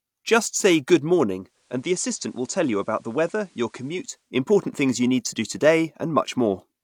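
A speech recording with a digital radio blending to analogue from 1.36 s to 4.36 s: just after "say good" the receiver loses the digital stream and cross-fades over 0.48 s to the station's FM broadcast, returning before "things you need to". During the FM stretch the level falls by about 4 dB, and hiss rises to roughly 35 dB below the signal.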